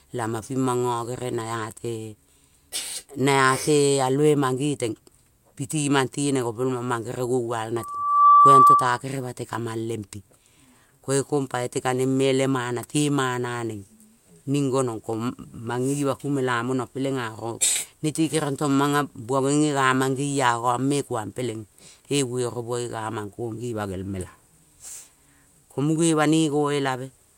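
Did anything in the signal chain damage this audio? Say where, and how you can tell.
Yes. A 1.2 kHz tone swells from 7.76 to 9.01 s, rising well above the speech: loudspeaker feedback squeal, where the microphone re-amplifies its own loudspeaker.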